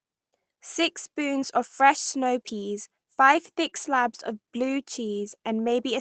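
At about 3.65 s there's a lost packet rebuilt from error correction. One 20 ms packet went missing, but the next one carried a low-bitrate backup copy, so the decoder played that instead. There's no gap, just a moment that sounds a bit rougher and grainier than what's around it.

Right after, from about 3.69 to 3.74 s, comes a short concealed packet loss. About 20 ms never arrived in time, and the receiver papered over it by stretching the last bit of sound, then blended back into the real signal. It comes across as a quick smear or wobble. The whole thing rides on an Opus call path that stops at 8 kHz, so there's no top end above that anyway.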